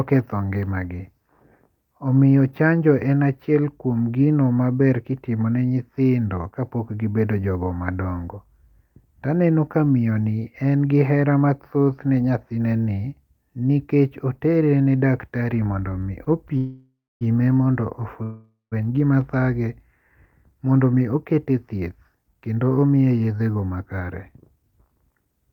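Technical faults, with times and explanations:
16.24 s: short stall from a late packet. The receiver briefly held the last sound for about 17 ms while waiting, then resumed with nothing lost.
16.58–17.23 s and 18.23–18.74 s: call audio freeze. Packets were likely delayed, so the last sound was stretched into a fading buzz, then silence, for 0.63 s and 0.49 s before resuming where it left off.
20.46–24.08 s and 24.56–25.33 s: jitter buffer speed-up. To shed built-up delay, tiny pitch-period slices were repeatedly cut, about 0.4 s and 0.1 s in total, so the audio runs about 10% fast at unchanged pitch.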